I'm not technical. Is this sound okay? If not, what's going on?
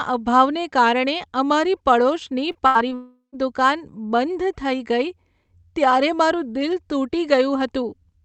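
No. Everything that goes wrong is packed into less than a second, from about 2.5 to 3.3 s, and it all comes from pieces of the call failing to arrive over the network.

First come two cases of short concealed packet loss, at 2.51 to 2.57 s and again at 2.89 to 2.93 s. Tiny pieces of the call, about 40 ms and then about 20 ms, never got through in time. The receiving end patched each hole by stretching out the sound just before it, so you hear a quick smear or wobble rather than a clean gap, and a short sound there can simply disappear.

In between, at 2.67 to 2.77 s, there is a burst of packet loss: several pieces in a row went missing, about 80 ms worth. The receiver kept the last sound going and faded it, so a held buzz or hiss briefly replaces what was said. The speech then picks up a little further on, with that fragment gone.

Right after, from 2.95 to 3.34 s, comes what sounds like a long network dropout, most likely the connection stalling for about 0.4 s. 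The last sound is drawn out and fades away, then about a tenth of a second of silence follows before the voice returns. Roughly 0.4 s of speech is lost there. The audio also has the slightly dull quality of the call system, which keeps nothing above about 8 kHz.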